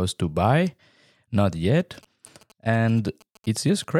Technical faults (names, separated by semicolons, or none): GSM signalling bursts